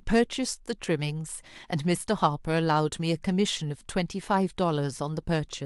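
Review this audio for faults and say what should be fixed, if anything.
Nothing in this speech recording calls for correction. No repair is needed.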